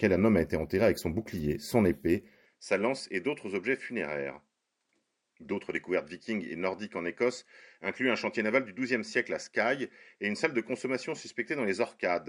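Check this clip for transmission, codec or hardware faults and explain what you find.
One fault is audible. Input switched to a poorer device at 2.46 s, after "son bouclier son épée": likely a microphone change, cutting everything above 10.3 kHz and dropping the level about 5 dB, with no gap.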